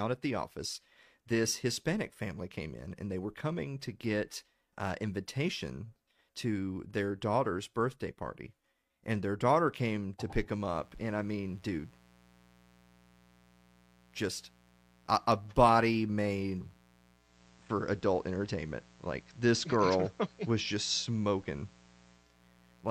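A speech recording with two faults. From 10.69 s, just after "came to pick them", a mains buzz appears and continues to the end: a steady, raspy tone built on 60 Hz harmonics, roughly 30 dB below the speech. This is switching spikes from a dimmer, rectifier or unshielded line leaking into the signal path twice per mains cycle. From 17.11 s to 22.43 s, digital radio blending to analogue occurs. The receiver loses the digital stream and cross-fades over 322 ms to the FM broadcast, bringing in hiss roughly 35 dB down and a level shift of about 2 dB.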